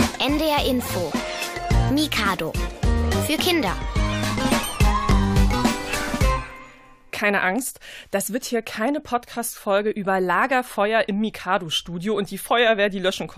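At 2.16 s and again at 5.11 s the audio skips forward through an overlap between stream segments. Two adjacent segments claimed the same stretch of time, and the player discarded the overlapping part even though that sound wasn't actually duplicated. About 6 ms goes missing at the first point and about 9 ms at the second, with segments one second long. Each is heard as a tiny skip. On a waveform, the trace jumps abruptly at the joins instead of continuing smoothly.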